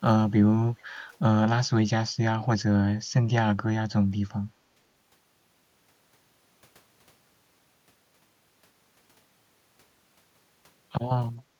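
A speech recording with a brief echo leak from 0.78 to 0.84 s: a faint copy of the voice returns about 435 ms late, very low in level, likely residual echo passing an echo canceller.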